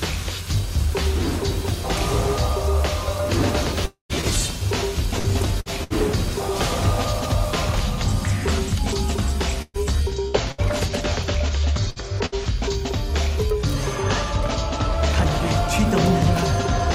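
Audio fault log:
3.85–4.12 s, long network dropout: the last sound carries on as a fading buzz or hiss, then about 0.12 s of near-silence, and it resumes with roughly 0.24 s gone, likely a network stall.
4.21–5.93 s, repeated packet loss (robotic sound): four patched holes, longest 66 ms, covering about 11% of the stretch, so it turns choppy with pieces missing.
9.62–10.61 s, repeated packet loss (robotic sound): three holes this time, one as long as 117 ms. With about 24% patched over, the chop covers more of this stretch.
11.90–11.99 s and 12.26–12.35 s, burst of packet loss: around 60 ms lost each time, bridged by a fading continuation of the last sound before it jumps ahead.
13.50 s, bit error spike: a single corrupted sample jumps and snaps back, giving one sharp broadband tick unrelated to the surrounding sound.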